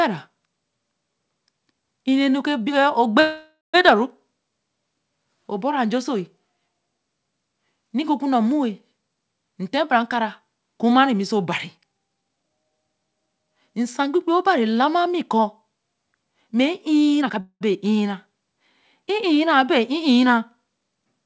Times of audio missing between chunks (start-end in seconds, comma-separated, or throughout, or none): none